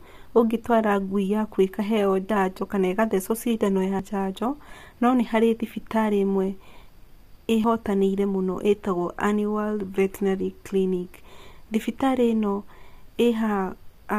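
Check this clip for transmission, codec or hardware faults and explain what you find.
Two kinds of fault are present: compression damage across the whole speech clip, and three short skips where pieces of audio are missing.

Throughout, the speech sounds rough and grainy, consistent with low-delay AAC compression, likely AAC-ELD at a low bitrate, which fits roughly 32 kbps. With too few bits to code the pitch harmonics cleanly, the codec fills the gaps with noise and rebuilds the top band crudely. On a spectrogram the harmonic lines look smeared, with a noise haze between them and a flat, patchy upper band.

Dropped buffers (overruns) are heard at 2.30 s, between "yaku ĩkaheo" and "kana ĩkathecwo cindano"; at 3.99 s, just before "njanjo no nĩ harĩ"; and at 7.64 s. Each is a sudden jump in the sound, with no silence, because the two sides are joined directly after samples were likely overwritten before the program read them. 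The losses are about 20 ms, 70 ms and 50 ms. The waveform shows an abrupt discontinuity at each point, and the spectrogram shows a thin vertical broadband line where the sound jumps.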